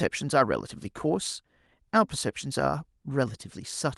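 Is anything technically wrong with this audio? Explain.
No, nothing technically wrong can be heard here.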